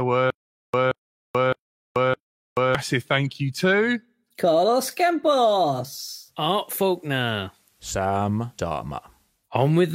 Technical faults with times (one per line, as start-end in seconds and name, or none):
0.30-2.75 stutter with silent gaps
6.13-9.51 digital radio blending to analogue